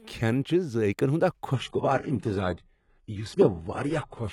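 At 1.54 s the speech shifts to an adaptive stream at a lower bitrate and stays there to the end, as the stream stepped down after the connection slowed. Treble turns thin, consistent with roughly 96 kbit/s AAC-LC dropping to 12 kbit/s HE-AAC. A spectrogram shows a sudden ceiling near 11.5 kHz, while the waveform runs on without any gap.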